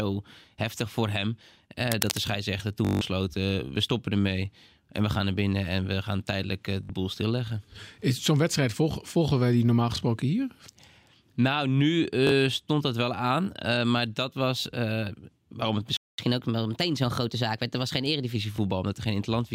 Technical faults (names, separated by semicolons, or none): cable scratch noise; Bluetooth stutter; playback stall; catch-up at higher speed